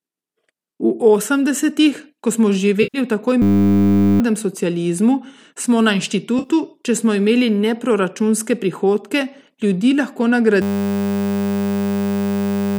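AAC frame loss with concealment appears first at 2.83 to 2.98 s: about 110 ms of coded frames never reached the decoder, so it rebuilt the gap from the last good spectrum. That patch sounds smeared and noisy rather than silent. A second loss at 6.39 to 6.49 s, about 60 ms, gives a shorter phasey blur, and a single dropout at 9.61 s is only a brief smeared patch. The 10 ms size of the smallest loss fits the short frames of a low-delay codec.

A system hang loop interrupts at 3.42 to 4.20 s. The machine or driver stalled while the audio hardware kept replaying one 10 ms stretch of its ring buffer. That exact repetition at 100 times a second turns into a steady, hard buzz, and roughly 0.7 s of real audio is lost under it. The same hang returns at 10.62 s and runs to the end of the clip, replacing about 2 s with that buzz.

Beneath all of this, a light graininess in the sound likely comes from low-delay AAC compression.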